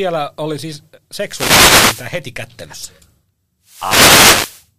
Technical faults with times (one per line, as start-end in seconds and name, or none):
1.24-2.12 wireless microphone noise hit
3.64-4.68 wireless microphone noise hit